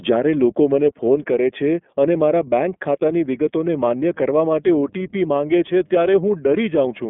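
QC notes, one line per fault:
throughout: iLBC codec. The whole clip sounds squeezed into a phone line, with nothing above about 3.8 kHz and the usable band sitting roughly between 200 Hz and 3.4 kHz, so the speech loses its air and sibilance. There's a plainly audible rough, slightly synthetic edge as well, because each 30 ms frame's excitation is coded on its own with no help from the frame before. That frame length fits iLBC's 13.33 kbps mode.
3.73 s to 7.1 s: mains hum. A steady low 50 Hz drone comes in at 3.73 s and stays right to the end, with some low harmonics riding on it. It sits around 20 dB under the speech. That's the power line leaking into the signal, most commonly through a ground loop or a nearby transformer.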